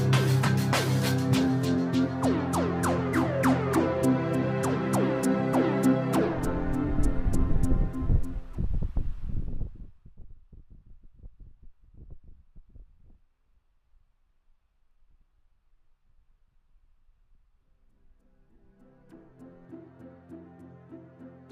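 From 9.22 to 10.17 s there is zipper noise: the level falls by roughly 20 dB in under a second, but the gain moves in discrete increments, around 400 per second, instead of a smooth ramp. Each jump puts a small discontinuity in the waveform, so the fade carries a fast ticking, buzz-like texture that lasts only while the level is moving, which points to gain updated once per buffer without interpolation.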